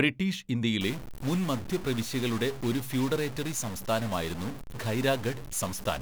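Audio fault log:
0.81 s to end, stuck bit: from 0.81 s the speech takes on a harsh, buzzy distortion, and the pauses fill with steady hiss-like noise instead of falling silent. This is likely a single data bit held at a fixed value, so about half the samples are shifted by a step somewhere around -35 dBFS. On a waveform, silent stretches show a jagged offset band; on a spectrogram, broadband noise fills gaps above the floor.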